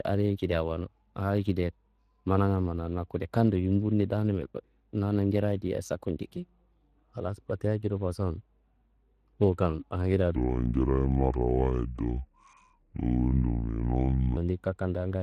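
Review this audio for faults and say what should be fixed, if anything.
The whole clip carries Speex codec damage: plainly hoarse, noisy speech, which fits a Speex setting around 22 kbps. Encode at a higher quality setting, or use a modern codec.

From 10.36 to 14.37 s there is a section at the wrong speed, playing at 0.686 times its original rate and about seven semitones lower. The likely cause is a clock mismatch during editing or playback. Keep the source and playback sample rates matched throughout the edit chain.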